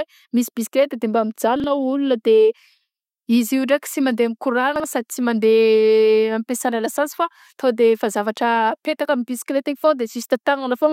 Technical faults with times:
1.56-1.64 chunks out of order
4.76-4.84 chunks out of order

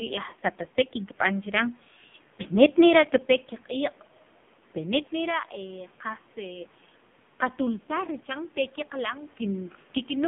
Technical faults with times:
0.00-10.27 AMR narrowband mobile codec
0.30-0.33 lost AMR speech frames

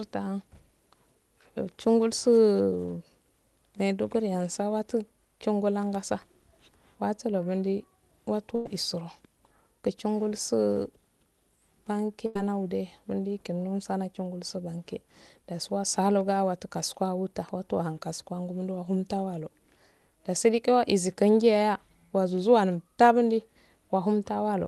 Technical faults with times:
8.55-8.66 burst of packet loss
12.26-12.36 burst of packet loss

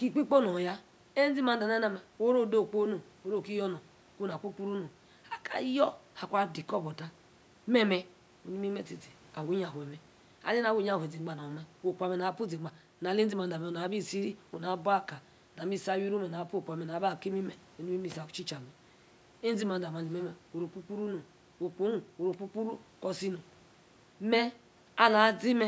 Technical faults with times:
none

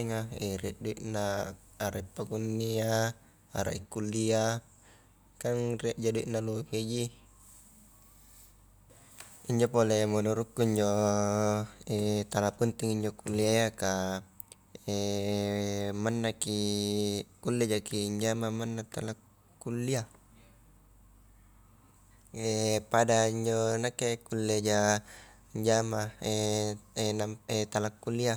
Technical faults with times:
none

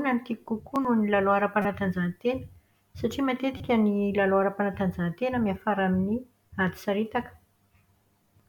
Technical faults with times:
1.62-1.65 corrupt frame decoded
3.57-3.60 corrupt frame decoded

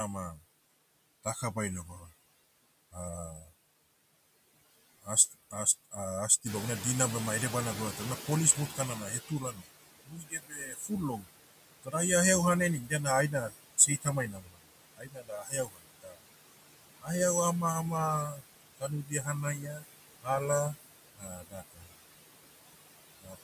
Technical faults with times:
0.00-23.43 noise suppressor artifacts
1.24-3.47 speech cut by the noise suppressor
5.03-6.45 speech cut by the noise suppressor
6.45-9.50 noise suppressor catching up
8.70-17.10 speech cut by the noise suppressor
18.30-21.95 speech cut by the noise suppressor
23.21-23.38 speech cut by the noise suppressor

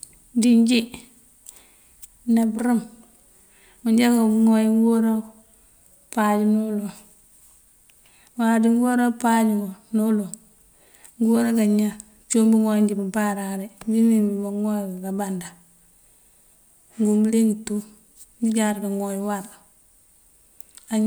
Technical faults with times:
none

